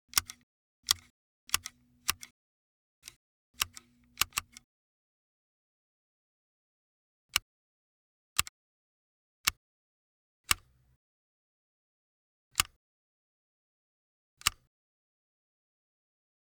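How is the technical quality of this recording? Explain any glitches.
A time-stretched section is the main glitch. From 7.30 to 10.22 s the audio plays about 1.93 times faster with unchanged pitch, likely from software dropping short pieces, making it rushed. A spectrogram shows events squeezed closer together while frequency bands stay put.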